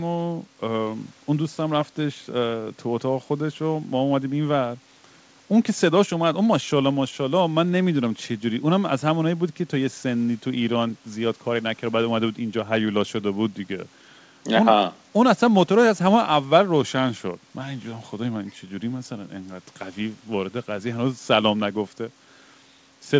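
No technical faults are audible.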